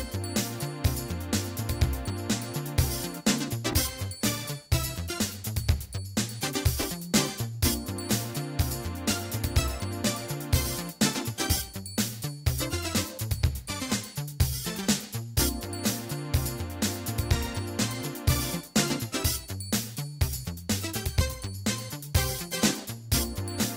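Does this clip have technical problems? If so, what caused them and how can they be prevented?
Yes. Chunks out of order: at 3.71 to 3.73 s and again at 6.82 to 6.84 s, one block of roughly 10.67 ms was delivered one chunk late and played after its successor. No audio is lost, but the swapped pair creates three hard joins, heard as a brief jumbled flicker. Preventing this requires sequence-numbered buffers with a reorder queue, so late chunks are slotted into place before playback.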